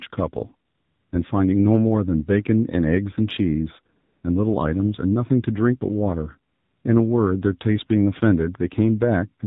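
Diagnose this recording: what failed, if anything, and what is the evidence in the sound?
AMR narrowband mobile codec, throughout, at the codec stage: the speech stops dead at 4 kHz and has a plainly buzzy, synthetic edge, which fits a 7.4 kbps mode. Each 20 ms frame rebuilds the voice from a vocal-tract filter fed by sparse pulses, so natural texture is lost.

AMR comfort noise at 0.70 to 1.12 s, 3.96 to 4.24 s and 6.52 to 6.84 s, in call processing: for about 420, 280 and 320 ms the real background gives way to a smooth, steady hiss that switches in and out. The sender stopped transmitting speech frames, and the receiver synthesized noise from a coarse level-and-spectrum description.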